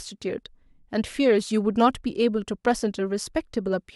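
Speech, with no audible technical faults anywhere.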